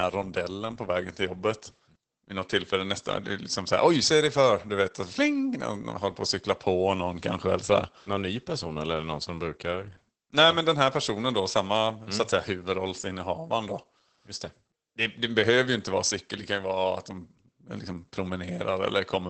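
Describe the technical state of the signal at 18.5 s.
At 18.5 s the speech is still running through Opus voice compression, which lasts the whole clip. The SILK coder is working at a low rate, roughly 12 kbps, and that wideband mode keeps only the band below about 8 kHz while coding the excitation coarsely. The voice sounds muffled, slightly hoarse and faintly robotic.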